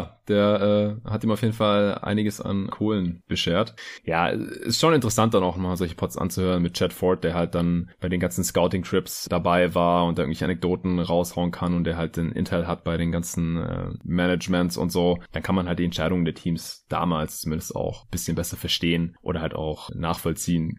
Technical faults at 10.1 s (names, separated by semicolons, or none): none